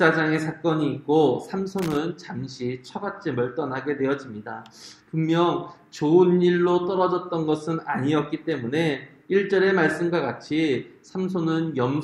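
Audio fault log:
1.79–1.97 s, loose connector crackle: an irregular burst of scratchy crackle as a worn contact makes and breaks, unlike a single clean click or steady dropout.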